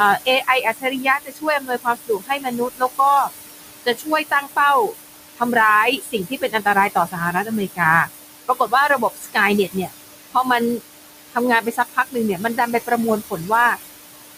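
Noise suppressor artifacts run through the whole speech clip. The room noise sits about 9 dB below the speech. The suppressor treats that steady noise as unwanted and pulls it down by about 19 dB, frame by frame. So the background drops away in the pauses and comes back up under the speech. The noise floor pumps with the talking instead of staying level.

Speech cut by the noise suppressor comes in five stretches. The suppressor mistakes parts of the speech for noise and turns them down with the background. The first stretch runs from 0.25 to 3.31 s, with drops of up to about 22 dB over roughly a second and a half. The next runs from 3.84 to 4.59 s, with drops of up to about 19 dB over a few tenths of a second. Then 5.97 to 8.09 s, up to about 17 dB, for under a second. Then 8.48 to 9.92 s, up to about 19 dB, for about half a second. The last runs from 11.31 to 13.77 s, up to about 21 dB, for about a second. 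In these spans, parts of the speech sound swallowed.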